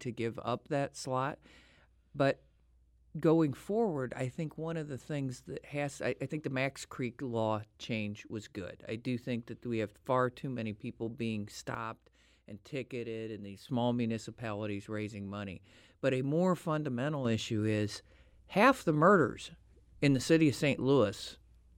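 A sudden gain jump, likely a digital gain step applied without a ramp, drops the speech and background noise together by about 6 dB from 11.75 to 13.69 s. A second jump lifts both by about 6 dB from 17.25 s to the end.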